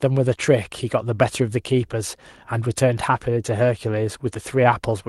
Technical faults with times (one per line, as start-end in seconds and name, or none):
0.33-0.43 lost packet rebuilt from error correction